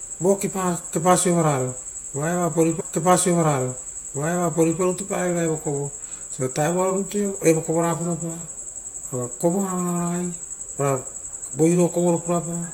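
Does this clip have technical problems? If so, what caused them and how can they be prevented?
Yes. A stream segment repeated: from 2.79 s to 4.80 s, about 2.0 s of speech plays a second time after a small blip at the jump back. The player fetched or queued the same segment twice. Unlike a buffer-underrun stutter, which loops a tiny fragment or leaves silence, this replays a whole, clean stretch of the programme. To prevent it, the player should track segment sequence numbers and drop duplicates before queuing.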